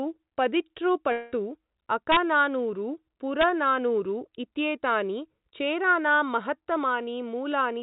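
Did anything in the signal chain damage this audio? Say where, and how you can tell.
Yes. At 1.12 to 1.34 s about 200 ms of the audio is missing, and a fading buzz or hiss stands in for nearly all of it before the sound resumes further on. That points to a long network dropout, likely packets never arriving while the receiver stretched the last sound to conceal the gap.

An integer overflow in a gain or summing stage, or in a sample-format conversion, produces violent cracks at 2.12 to 2.17 s and 3.41 to 3.44 s. Peaks pushed about 2 dB and about 0 dB past full scale wrapped to the opposite sign instead of being limited. The cracks are far harsher than clipping, and the G.711 mu-law call path, with nothing above 4 kHz, carries them through.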